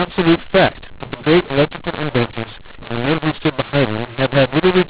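Throughout the speech, mu-law and A-law are mixed up. The telephone audio was coded with mu-law but decoded as A-law. Levels come out scrambled, so the speech sounds harsh and distorted. Pauses fill with noise, because the quietest samples are lifted well above silence.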